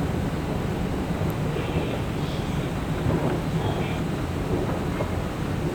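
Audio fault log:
2.5–4.0 s, chunks out of order: a half-second chunk of the sound shows up two chunks late, so this stretch plays in the wrong sequence. Nothing's missing, but it comes across as a jumbled moment, with three hard joins.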